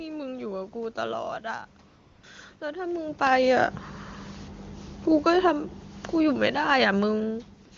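From 1.87 to 2.23 s, and again from 2.59 to 2.61 s, the phone judged the talker silent and stopped sending speech frames, so AMR comfort noise replaces the real background with a smooth synthetic hiss. Between 5.11 and 7.45 s, automatic gain falling sets in as the gain control lowers its level by about 5 dB, so the speech and room noise sink together. From 7.65 to 7.71 s, comfort noise briefly substitutes for the true background again.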